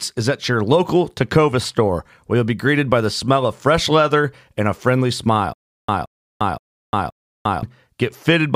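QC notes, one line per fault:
5.53–7.63 s, stutter with silent gaps after "leather and a friendly": a 0.17 s burst repeats four times every 0.52 s, separated by 0.35 s of silence, likely a stalled stream. It shows as identical blocks between flat silent gaps.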